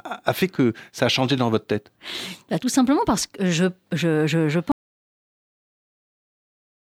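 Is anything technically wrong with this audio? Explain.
Yes. There is an audio dropout to silence starting at 4.72 s and running to the end of the clip. The speech stops in mid-flow. What follows is silence with no room tone at all. The recorder kept writing silence after the signal was lost. The likely cause is a disconnected input, a failed link or an accidental mute. Nothing spoken after that point survives.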